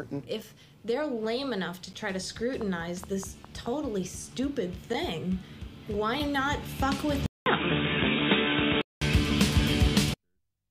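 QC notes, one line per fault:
1.93 s, gap between stream segments. The sound drops out for about 10 ms. The hole has hard edges at both ends. Two stream segments do not meet in time, so the player fills the space with silence. Nothing is lost from the audio. The added 9.9 ms simply pushes the later sound back. This fits a join between segments about one second long. It is heard as a brief, sharp break.
2.61 to 3.67 s, train of clicks. About seven clicks sit on top of the sound. They come at a steady 4.8 per second. They share much the same shape. The loudest peaks rise a few dB above the sound itself. The cause is likely interference from nearby equipment or a faulty connection or power supply. It is heard as an even ticking laid over the audio for about a second.
7.26 to 9.01 s, input switched to a poorer device. A silence of about 200 ms marks the switch. After it the sound turns dull and boxy. 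Nothing passes above 3.8 kHz, so the top end is gone. A new, faint noise floor appears, far below the sound. The overall level stays about the same. The likely cause is a change of input to a narrower-band microphone or headset.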